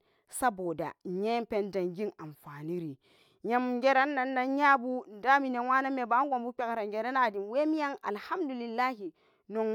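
Right after "saboda nyen pen zangen", from 2.25 to 3.18 s, the speech slows about 6% and drops roughly a semitone, then snaps back. After "mebanan gunbu benrangrana", 7.31 to 8.98 s, it speeds up 6% and rises a semitone. Both are likely a drift correction step, where clock-matching software nudges the playback rate to rebalance its buffer.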